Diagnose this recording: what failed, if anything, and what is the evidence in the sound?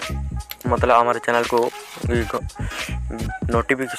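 Nothing in the chain seems to have failed here, since no stage of the recording or playback path leaves any audible trace of trouble anywhere in the sound.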